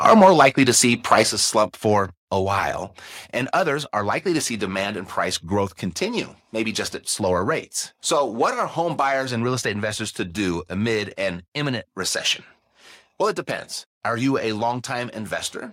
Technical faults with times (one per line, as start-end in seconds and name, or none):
0.05-0.69 microphone overload
0.24 microphone volume stepped down
1.11-1.21 microphone overload
1.23 microphone volume stepped down